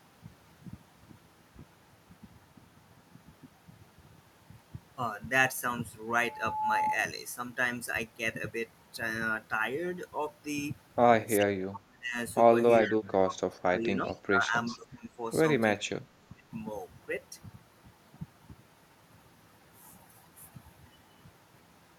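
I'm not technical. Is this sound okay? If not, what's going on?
No. Three separate problems can be heard.

At 6.14 s a steady whistling tone, at about 856 Hz, swells up over roughly half a second and screams until 6.99 s. This is a loudspeaker feedback squeal. A microphone was picking up the loudspeaker it was feeding, so the sound went round and round, getting louder each trip, until that one pitch took over.

From 11.38 to 12.19 s, again from 12.82 to 15.18 s, and once more from 15.77 to 16.44 s, the speech suddenly drops away, going very quiet or breaking up in pieces before coming back. This is speech suppressed in double talk. The likely cause is that both people were talking at once, and the call's echo-removal system couldn't tell the talker apart from the other side coming through the loudspeaker, so it turned everything down together.

Inside that middle stretch, from 12.83 to 12.91 s and from 14.05 to 14.17 s, you can hear brief, faint repeats of the speech arriving about 0.39 s late, like a small ghostly echo. 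That is echo leak. Most likely one side was on a speakerphone and the echo-removal system didn't quite catch everything its microphone heard, so a scrap of the sound was sent back.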